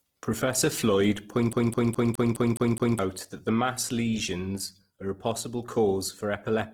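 Across the whole recording the speech has a rough, grainy texture, with a noisy, fizzing quality rather than clean harmonic detail. The band extends to about 20.4 kHz, so nothing sounds muffled, but the fine structure is replaced by filled-in noise. This is likely Opus compression in its fullband music (CELT) mode, which fits a low bitrate around 16 kbps where bands are patched with folded or noise content.

From 1.53 s to 2.99 s the audio falls into a CD stuck on one turn. A segment of about 209 ms plays seven times in succession, with a brief mute at each jump back, producing a fast, perfectly even stutter. The pickup returns to the same point on every rotation until the loop releases and the clip continues with "that mass lesions are".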